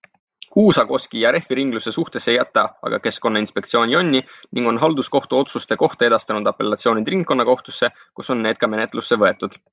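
No technical faults are audible.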